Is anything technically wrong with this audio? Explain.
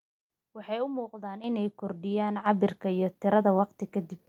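Yes. At 1.44 s and again at 2.46 s the microphone volume stepped up: the call software judged the input too quiet and raised the device's input gain in a single jump each time, by about 9 dB and then about 6 dB. Because the change happens at the microphone itself, the speech and the background noise rise together. The level lurches upward abruptly rather than gradually, and the clip ends roughly 15 dB louder than it began.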